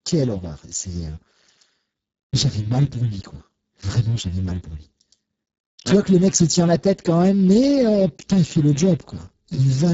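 Throughout, a Speex codec running at a very low setting, consistent with roughly 6 kbps, starves the excitation, leaving the speech noisy and hoarse, with nothing above 7.7 kHz.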